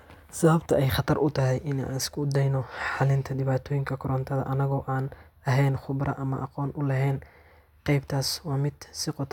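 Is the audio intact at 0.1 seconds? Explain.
Yes, at 0.1 seconds the audio plays through cleanly, with no dropout, distortion or other fault.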